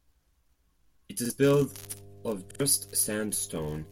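A short stutter at 1.25 s, where a fragment of the speech about 46 ms long sounds twice with a hard join, is a repeated buffer: fresh audio arrived late, so the last block was replayed, which fits a 2048-sample buffer. From 1.65 s to the end, a steady low 50 Hz mains hum sits about 25 dB below the speech, power-line interference coupled in through a ground loop or nearby transformer. At 2.51 s the repeated buffer returns, with the same piece playing three times in a row and roughly a tenth of a second of new audio lost.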